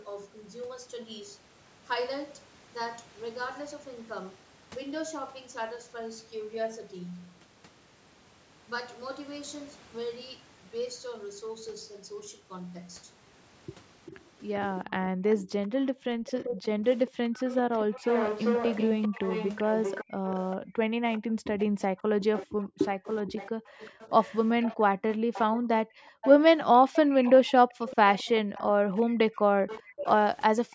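A speech recording in which, from 14.06 s to the end, the far end's echo canceller likely failed to remove all of its loudspeaker pickup. This echo leak returns a copy of the speech about 393 ms late and roughly 10 dB below it, heard as a trailing, doubled shadow. Where both sides talked at once, the canceller likely mistook the talker for echo and clamped down, producing speech suppressed in double talk at 15.15 to 18.05 s, 19.08 to 26.19 s and 27.37 to 30.71 s. The voice dips by as much as about 40 dB or drops out in pieces, for roughly two, four and two seconds in total within those spans.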